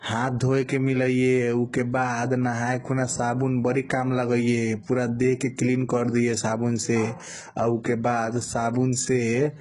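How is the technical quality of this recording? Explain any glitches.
The recording has one problem, and it runs the whole way through. Heavy HE-AAC compression is likely, at a very low bitrate, something around 12 kbps. The top is bright but synthetic, treble copied up from lower bands, so sibilants sound gritty and lispy, and nothing survives above about 11.1 kHz.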